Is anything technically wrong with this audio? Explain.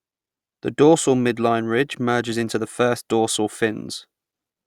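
No, there is nothing technically wrong with this speech recording.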